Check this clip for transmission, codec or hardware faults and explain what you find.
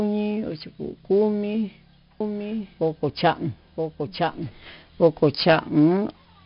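Two faults are audible in this speech clip.

4-bit ADPCM compression runs throughout. Each sample is coded as a coarse 4-bit step from a predicted value, so a gritty hiss rides on every loud syllable and sharp onsets distort. Nothing reaches above 5.3 kHz, and the 44 kbps rate suggests a sample rate near 11 kHz, which dulls the whole clip.

A doubled audio track runs from 2.20 s to 5.06 s. A full-band copy of the speech, about 5 dB quieter, trails the original by roughly a second, with no decay or room colour, and starts and stops abruptly. A second, slower capture path is the likely cause.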